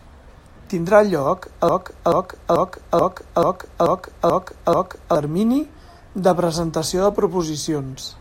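At 1.69 s the speech locks into a broken-record loop. A fragment of about 435 ms repeats exactly, back to back, eight times, until 5.15 s. The player or stream likely stalled and kept replaying its last buffer. Whatever should have played meanwhile is lost.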